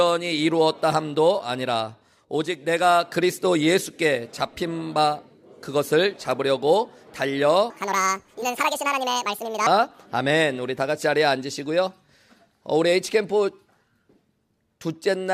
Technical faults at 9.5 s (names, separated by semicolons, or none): section at the wrong speed